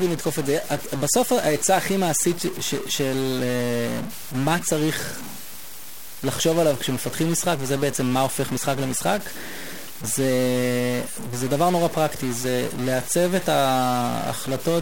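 From start to finish, the speech carries a harsh, buzzy distortion. It rides on every syllable. The pauses are not silent either. They fill with a steady noise bed at about -30 dBFS. This points to a stuck bit, likely from a broken data line or converter. One bit holds a fixed value, so about half the samples land off by that bit's weight. Near zero, the error flips with the waveform's sign, hence the noisy gaps.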